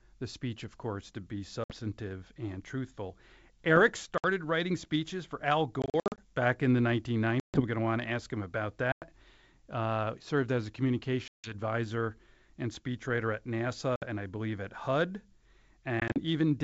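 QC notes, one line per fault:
1.64–1.74, 4.18–4.25 (before "writing speeches for"), 5.82–6.20 (scattered, before "back in the"), 7.40–7.63, 8.92–9.03, 11.28–11.55 (after "served as a"), 13.96–14.04, 16.00–16.20 s, packet loss on an ADPCM call: hard-edged silent holes of 60 to 200 ms, with the lost audio at 5.82 and 16.00 s broken into short gaps. Each is followed by slightly distorted speech that settles within tens of milliseconds, because the decoder's predictor and step size drift from the sender's. A plain dropout resumes cleanly, without that recovery transient. The G.722 wideband speech stays clear up to about 7 kHz between the holes, with a light hiss in the band above 4 kHz.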